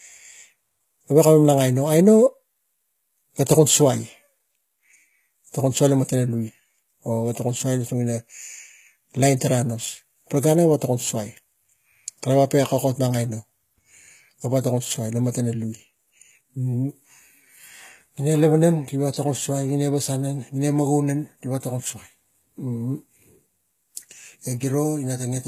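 Throughout the speech, the treble sounds synthetic: s sounds come out gritty and metallic, with plainly audible codec damage, likely from HE-AAC compression at a low bitrate that fits about 20 kbps. Spectral band replication copies lower bands upward, so the upper harmonics don't line up with the ones below. A spectrogram would show blocky, repeated texture in the high band and nothing above 14.9 kHz.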